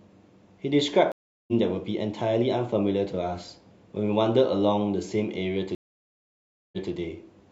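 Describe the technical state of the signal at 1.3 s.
At 1.3 s the connection has dropped and the player is reconnecting. This stream reconnect spans 1.12 to 1.53 s: about 0.36 s of silence, after which a fresh decoder resumes the speech roughly 0.3 s further on, so that stretch is skipped.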